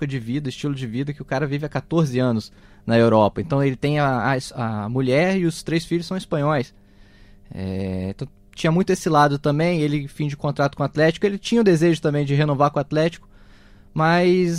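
A speech recording carrying mains hum for its entire length: a steady 50 Hz tone with low harmonics sits roughly 35 dB below the speech. A ground loop or a nearby transformer is coupling the power line into the signal path.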